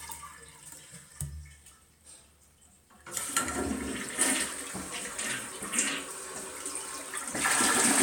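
The clip is a recording of sounds, and no technical fault can be heard in it. There are no problem moments to time and no cause to point to.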